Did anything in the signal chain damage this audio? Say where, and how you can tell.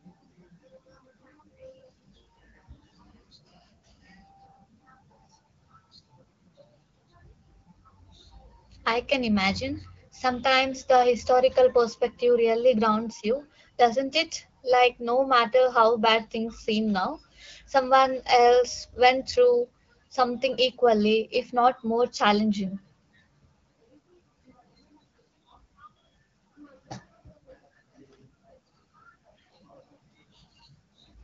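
No, nothing in the chain damaged this speech; what you hear is the AMR wideband (HD Voice) path at 12.65 kbit/s working as designed, with speech coded up to 6.4 kHz, shaped noise filling the band to 7 kHz, and only the light coding texture expected at that rate.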